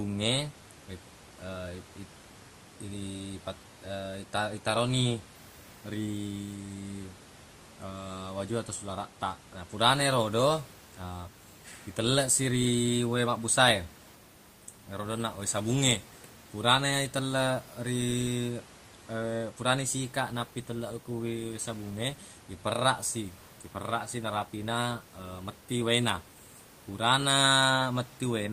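Nothing stood out on listening to this speech recording, apart from a faint background from the room sitting about 27 dB below the voice.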